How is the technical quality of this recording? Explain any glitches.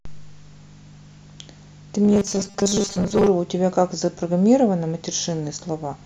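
One glitch affects the recording. Robotic sound from repeated short buffers, 2.05 to 3.29 s: likely audio arriving too seldom, so about 5 ms chunks repeat, forcing a rigid, metallic 200 Hz buzz over the speech.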